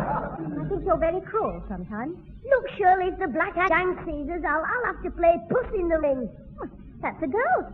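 At 0.33 to 0.39 s, 3.65 to 3.70 s and 6.00 to 6.04 s there is damaged data in a compressed stream. In each of these windows, about 40 to 60 ms long, the decoder meets corrupted bytes, misreads the frames, loses sync and hunts for the next valid frame header. Each one sounds like a chirp, squawk, click or short hole. On a spectrogram each shows as a narrow vertical smear of broadband or oddly banded energy. On the waveform it appears as an abrupt, jagged discontinuity.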